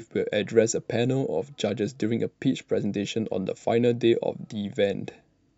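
No technical fault can be heard anywhere in the speech, so there is nothing to place in time or trace to a cause.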